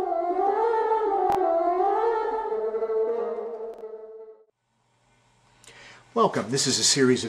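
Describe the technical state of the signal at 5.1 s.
At 5.1 s the signal is intact, with no audible technical fault at that point.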